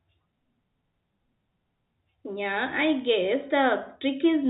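Bit errors on a digital phone line tick through this speech from 2.98 to 3.02 s, as flipped bits, roughly 0.15 percent, corrupt individual mu-law samples into sharp clicks.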